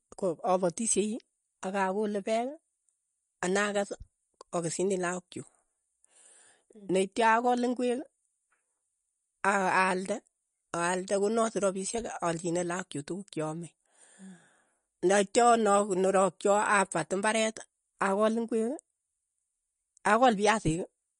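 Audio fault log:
Throughout: MP3 compression, the likely cause of plainly watery speech; nothing above 10.6 kHz and weak bands flicker between frames, fitting about 40 kbps.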